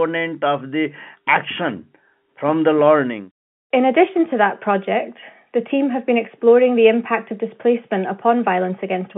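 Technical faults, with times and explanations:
No technical faults can be heard anywhere in this recording.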